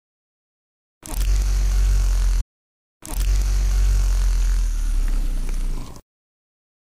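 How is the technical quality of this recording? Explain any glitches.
The recording has one clear glitch: a stretch of the sound plays twice.

From 2.39 s to 4.39 s, the audio jumps back and repeats about 2.0 s of material, with a small blip at the point where it jumps. This is a stream segment repeated: the player fetched or queued the same chunk of the stream twice and played both copies back to back. The repeat adds roughly two seconds to the running time.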